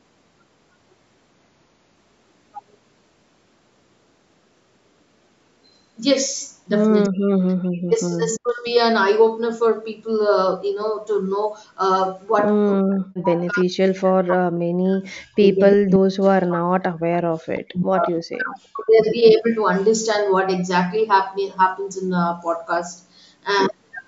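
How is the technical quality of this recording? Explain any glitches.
The recording has repeated dropouts from about 7 s onward and a faint echo near 18 s, typical of a speakerphone call with overlapping talk.

Speech suppressed in double talk occurs at 7.05–8.65, 12.78–15.62, 15.79–17.01, 17.48–18.08 and 18.38–18.99 s. Overlapping talk likely made the echo canceller duck the voice by roughly 35–40 dB, leaving waveform gaps and spectrogram blanks.

Echo leak appears at 18.02–18.14 and 18.33–18.38 s. The canceller likely missed loudspeaker pickup, letting a copy return 338 ms late, about 30 dB down, as faint spectrogram smears.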